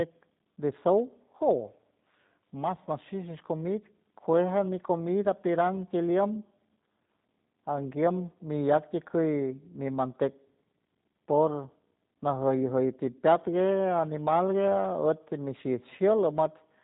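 Throughout the speech the sound is thin, slightly rough and synthetic, with a boxy, band-limited quality, since nothing above 4 kHz is present. This is G.729 codec damage, plainly audible here. The character fits the G.729A variant at around 8 kbit/s, which rebuilds each 10 ms frame from a vocal tract filter, a pitch predictor and a handful of pulses instead of sending the waveform itself, so fine detail and breathiness are lost.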